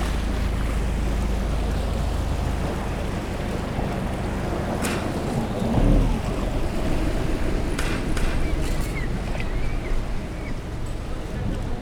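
From 6.85 s to 8.81 s the sound is shadowed by a second copy of itself, trailing by roughly four tenths of a second and only a few decibels quieter. It is a doubled audio track: the copy is full-band and dry, with no decay or room colour, and it cuts in and out abruptly at those edges. The likely cause is the same signal being captured a second time through a slower path and mixed back in.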